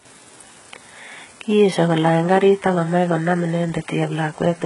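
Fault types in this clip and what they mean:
HE-AAC compression: the treble is likely rebuilt from copied lower bands, so sibilants sound gritty and lispy; the spectrogram shows smeared, repeated-looking upper bands ending abruptly at 11 kHz.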